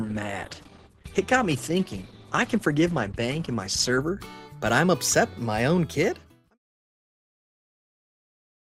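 The sound opens on a stream starting at a low bitrate. For the first 4.0 s it is dull, with nothing above 12.1 kHz, and codec artefacts are strong. That fits a low Opus rate, about 16 kbit/s. At 4.0 s the quality jumps with no gap, as if the player stepped up to about 64 kbit/s. A smooth fade-out then runs from roughly 5.5 s to 6.59 s.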